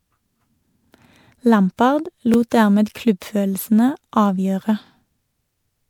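From the first moment, the speech sounds swirly and hollow. Consonant attacks are blurred and smeared. There is nothing above about 20.8 kHz. The texture is worse than one MP3 pass at a decent rate would give. The likely cause is generation loss. The audio seems to have been MP3-encoded and decoded several times, perhaps four, at a rate that fits 128 kbit/s. Each pass requantises on a shifted frame grid, so the noise and spectral holes build up.

From 2.34 to 2.36 s there is a brief stutter. A slice of about 23 ms plays twice. These are overlapping chunks: each processing chunk, about 2.5 s long, starts before the previous one ends, so the join repeats audio. The same fault returns at 4.86 to 4.89 s, right after "klubbfølelsene avgjøre", with the same 23 ms doubling. Because the chunk period is regular, the two clicks fall about 2.5 s apart.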